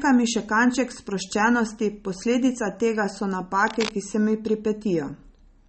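From the start the speech sounds watery and swirly with nothing above 8.4 kHz, plainly audible damage that likely comes from MP3 compression at a bitrate around 32 kbps. Right after "sproščenosti posledica tega so", from 3.67 to 3.91 s, a burst of cable scratch noise rustles over the speech about 10 dB below it, likely from a worn contact being moved.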